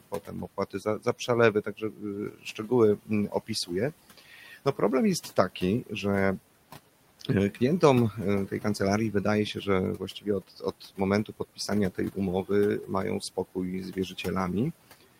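Noise suppressor artifacts run through the whole clip. The suppressor pulls steady noise down by about 18 dB, frame by frame. The room noise, about 18 dB below the speech, dips in pauses and swells under the talking.

Speech cut by the noise suppressor comes in five stretches. From 0.0 to 4.81 s, about a second and a half of speech is turned down, by as much as about 19 dB. Smaller cuts follow at 5.23 to 5.92 s (about 13 dB) and 7.2 to 7.82 s (about 11 dB). From 9.54 to 12.5 s, under a second is lost, up to about 19 dB. From 12.82 to 14.26 s, a few tenths of a second drop by up to about 18 dB. The suppressor mistook quiet speech for noise. Soft sounds and endings come out swallowed and faint.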